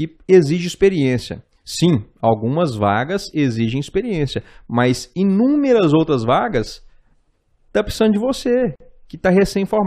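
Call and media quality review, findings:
Gap at a join of encoded pieces, 8.76–8.80 s, after "tá precisando de": 46 ms dropout, flat waveform, blank spectrogram column; chunk boundary keeps encoder delay and padding.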